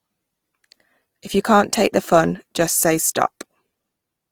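From start to finish, the speech carries plainly audible damage from Opus compression. The encoder likely ran in its music mode at a low bitrate, which fits roughly 24 kbps. It keeps each band's energy but rebuilds short-changed bands from folded lower content or noise. So the sound stays full in bandwidth with few gaps. Instead, the voiced tones turn rough and grainy, with a noisy sheen over the upper range.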